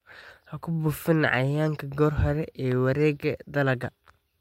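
No technical faults can be heard in the recording.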